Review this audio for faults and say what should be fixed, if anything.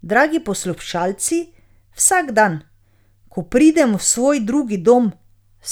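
No faults can be heard anywhere in this speech recording. Nothing needs to be fixed.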